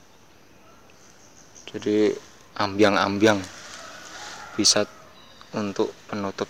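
A harsh, crackling fuzz from 2.63 to 3.31 s and a brief crackle at 4.66 to 4.77 s are hard clipping: peaks overdriven by about 6 dB and 3 dB were cut flat, adding high harmonics.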